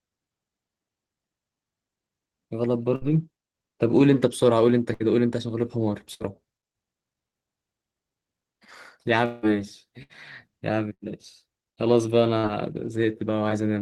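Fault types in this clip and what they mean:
Burst of packet loss: six short held buzzes or fading hisses of about 60 ms, then speech skips ahead past audio from packets that never arrived.
Long network dropout: at 9.25 s a fading buzz or hiss fills about 180 ms before speech resumes further on, likely a longer stretch when no audio arrived.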